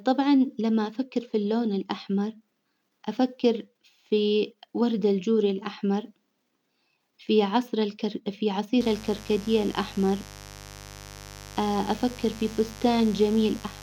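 Speech clip with mains buzz entering at 8.80 s and running to the end: a raspy 50 Hz buzz rich in harmonics, roughly 20 dB below the speech, from switching spikes leaking in.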